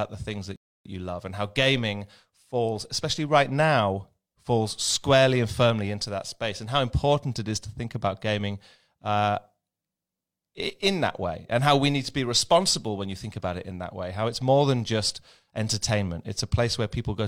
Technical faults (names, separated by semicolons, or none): rebuffering stall